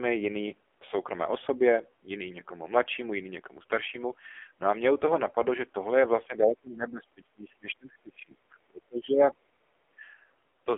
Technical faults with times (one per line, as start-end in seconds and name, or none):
0.00-10.77 AMR narrowband mobile codec
6.27-9.37 speech suppressed in double talk
9.66-10.04 speech suppressed in double talk